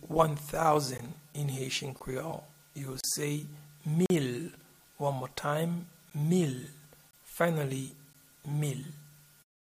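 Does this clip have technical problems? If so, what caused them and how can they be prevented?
Yes. Gaps between stream segments insert hard-edged silences at 0.98, 1.99, 3.01–3.04, 4.06–4.10, 6.10, 7.11–7.13 and 8.13 s. Each lasts 12 to 42 ms and they arrive about once a second, which points to 1-second segments whose time stamps don't quite meet. Unlike a dropout, no audio is lost: the sound pauses and resumes exactly where it stopped. Aligning segment time stamps so that each segment begins where the previous one ends prevents this.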